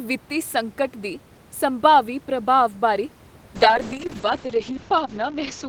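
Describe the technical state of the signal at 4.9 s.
At 4.9 s the signal is in a call bitrate drop that runs from 3.57 s to the end of the clip. The estimated bandwidth of the call fell, so the encoder had to work with far fewer bits. The coarseness points to a fall from about 32 kbps to about 7 kbps. The audio band shrinks from 20 kHz to 8 kHz. The speech sounds muffled and rough, and it stays that way to the end.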